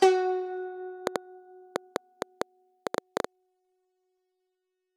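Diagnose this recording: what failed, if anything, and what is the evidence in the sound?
Train of clicks, 1.07 to 3.25 s: around ten similar, irregularly spaced pulses at about 5 per second, about 20 dB above the music, likely interference on the analogue wiring.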